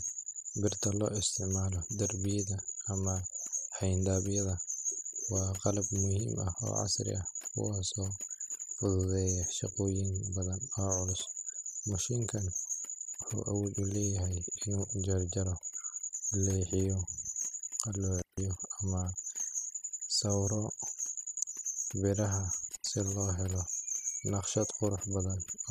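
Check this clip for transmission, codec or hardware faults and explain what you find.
Two faults are present: heavy-handed noise processing across the whole speech clip, and two brief dropouts from a bad connection.

Overdone noise removal runs throughout. The noise reducer was set too aggressively, so any frequency band sitting near its noise estimate is pulled far down or gated off, taking low-level parts of the voice with it. The background becomes near silence with twinkling specks.

Intermittent contact appears at 18.19 to 18.41 s and again at 22.71 to 22.84 s. A loose cable or plug breaks the signal path for about 156 ms and about 82 ms respectively. The audio cuts out with crackle at each edge, leaving faint hiss while the line is open.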